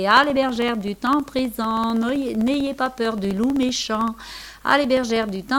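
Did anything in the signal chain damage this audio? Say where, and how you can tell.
Yes. Periodic USB or driver dropouts at the driver/buffer stage: from 0.11 s to 5.48 s, regular ticks recur every 64 ms, around a hundred of them. Each time, roughly a millisecond of audio is replaced by silence while the USB bus or audio driver is briefly blocked.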